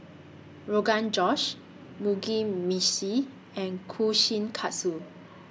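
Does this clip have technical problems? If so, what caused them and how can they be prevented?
No, there are no technical problems in this recording.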